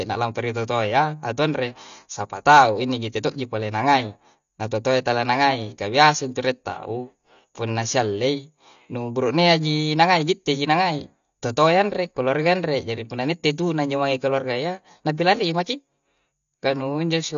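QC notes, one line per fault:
throughout, AAC compression: the speech was likely encoded as AAC-LC at a low rate, consistent with about 32 kbps, so nothing survives above 7 kHz and coarse quantisation leaves the sound dull, smeared, and plainly warbling or fizzy on sibilants.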